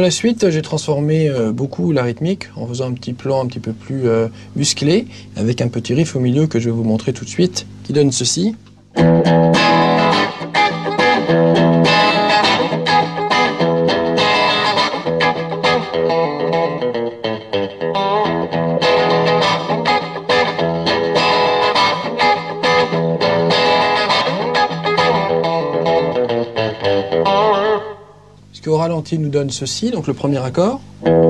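Listening closely, nothing in the audio stood out as a technical fault at any point.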